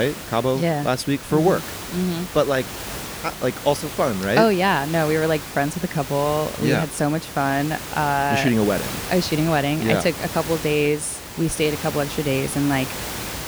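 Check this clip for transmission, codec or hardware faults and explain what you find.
Nothing stood out on listening to this speech recording; the room's own background noise sits about 12 dB below the speech as part of the recording itself.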